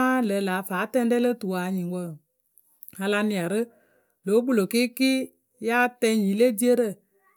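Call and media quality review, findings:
No audible faults found.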